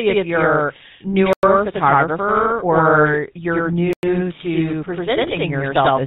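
From the start, the speech has a second copy trailing it by 92.88 ms. This is channel delay, heard as doubling. One channel arrives late, and the two are mixed to mono. The delay fits a 4096-sample buffer. The late copy is as loud as the first, so each syllable gets a distinct slap behind it.

Throughout, the speech also carries the GSM full-rate codec. Its damage is plainly audible. The band stops at 4 kHz, so the sound is dull and boxed in. The codec rebuilds the voice from a vocal-tract model fed by a sparse pulse train. That leaves a buzzy, gravelly roughness on the voice. The texture points to the 13 kbps full-rate coder.

At 1.33 s the sound stops dead for 100 ms and resumes at 1.43 s. The same thing happens from 3.93 to 4.03 s. These are gaps between chunks. The audio was delivered in blocks of about 2.5 s, and silence was inserted at each join. Nothing seems missing. The flow is simply cut. 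Both holes recur at a steady spacing.

From 5.23 to 5.37 s the speech breaks into squawks and gargling. These are GSM bit errors. Corrupted bits reached the decoder and scrambled the filter, pitch and gain values. The spectrum bends and the level jumps from frame to frame. The damage spans about seven 20 ms frames. The bit error rate is around 2%.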